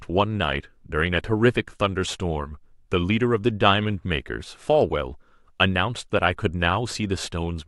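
A short stretch of speech with nothing technically wrong to point to anywhere in it, so there's nothing here to flag.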